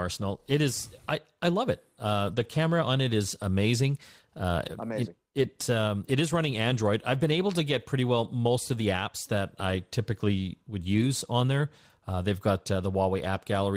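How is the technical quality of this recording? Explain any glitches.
The recording has repeated glitches from lost packets rebuilt from error correction. There are seven brief rough patches, each covered by a lower-quality substitute rather than a dropout:

2.27–2.45 s, just before "camera on it is"
3.41–3.43 s
5.37–5.43 s
6.69–6.79 s, between "um it is running" and "I've been able to"
8.75–8.81 s
9.69 s
10.93–11.03 s, between "typically would" and "on there"

In each case, packets went missing on the network, and the following packet's low-bitrate backup copy was decoded in their place. The longest stretch rebuilt this way is about 100 ms, at 2.27 s. The rest are 20 to 60 ms. Because the backup copy fills the hole, the speech never stops. Instead, these moments sound coarser and grainier, briefly losing clarity, before the normal signal returns.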